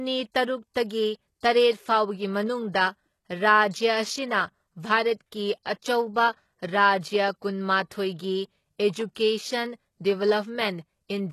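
Throughout the speech, the treble sounds synthetic and gritty, with s sounds turning lispy and metallic, most likely from HE-AAC compression at a low rate, consistent with about 16 kbps. The upper band is rebuilt from copied lower bands rather than coded, so its harmonics misalign. A spectrogram shows a hard ceiling at 12.3 kHz and blocky, repeated patterning above the crossover.

From 5.63 to 5.66 s, pre-echo puts a short hiss about 28 ms ahead of a sharp attack, softening its onset. The codec spread quantisation noise sized for the loud attack across the quiet start of its block. On a waveform, low-level fuzz rises before the transient; a spectrogram shows a broadband smear leading it.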